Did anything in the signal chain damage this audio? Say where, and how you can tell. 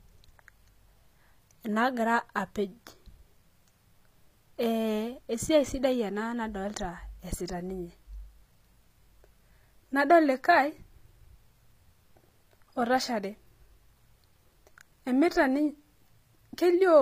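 Yes, at the codec stage, throughout the clip. Nothing sits above 15.4 kHz, and the damage is plainly audible. S sounds come out gritty and metallic. Likely cause: HE-AAC compression, which fits a low bitrate around 24 kbps. The treble is rebuilt from copied lower bands, so its harmonics don't line up.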